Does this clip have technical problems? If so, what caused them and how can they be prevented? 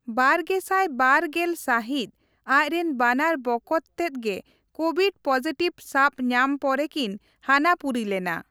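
No, nothing in this speech recording stood out as a technical problem on listening, so there is nothing here that calls for a cause or a fix.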